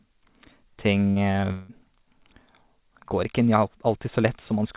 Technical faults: repeated packet loss (robotic sound)

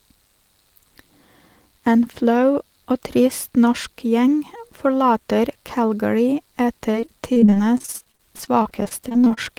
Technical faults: repeated packet loss (robotic sound)

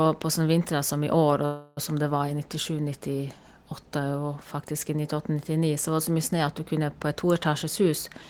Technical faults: call audio freeze; jitter buffer speed-up

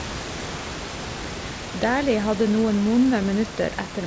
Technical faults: none

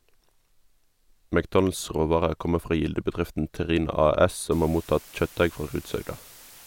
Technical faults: low bit depth with dither

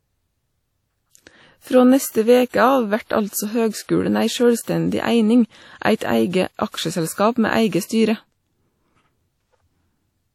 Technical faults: WMA compression

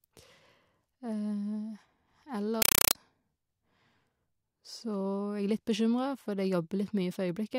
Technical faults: compressed stream played as audio

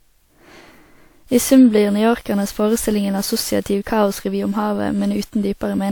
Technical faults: generation loss

